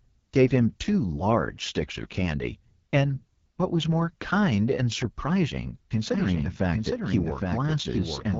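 Right from the start the whole clip carries the sound of the AMR wideband (HD Voice) codec running at one of its lowest rates; the roughness fits something like 8.85 kbit/s. At that rate the codec's vocal tract model doesn't get enough bits for its pulse excitation, so the speech comes out raspy and gritty. The top band, from 6.4 to 7 kHz, is just shaped noise standing in for real detail.

Then at 6.14 s a doubled audio track kicks in and runs to the end. A second full-band copy of the speech sits roughly 0.7 s behind the original, just a few dB quieter. It has no decay or room colour, and it switches on abruptly. The likely culprit is the same audio being picked up again through a slower path, or an edit leaving two copies stacked out of step.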